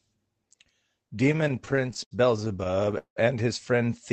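From 1.27 to 3.18 s, the speech suffers repeated stalls (stutter), ending just before "and his". Packets arrived late or too slowly, so the jitter buffer kept running dry. Each time, the receiver stretched the last sound to cover the wait. There are 29 such gaps, the longest 183 ms. About 539 ms is filled this way, roughly 28% of that stretch. Nothing is lost. The speech drags and hiccups instead. The call codec's dull, band-limited tone persists throughout.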